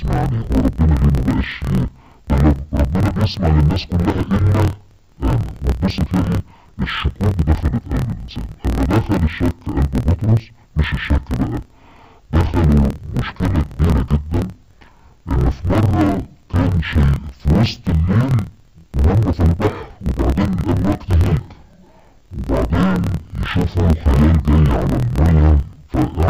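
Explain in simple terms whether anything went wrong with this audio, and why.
Throughout the clip, the audio suffers from interleaved audio read as planar. Samples arrive alternating left and right, but each block of about 26 ms gets split in half instead. Everything sounds an octave low, doubled and choppy, stuttering about 38 times a second.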